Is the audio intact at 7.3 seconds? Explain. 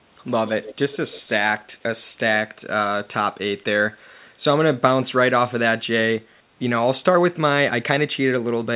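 Yes, the audio is intact at 7.3 seconds, with no dropout, glitch or distortion there, only the steady narrowband character of the call path, where nothing is heard above 4 kHz, which fits a G.711-type telephone codec.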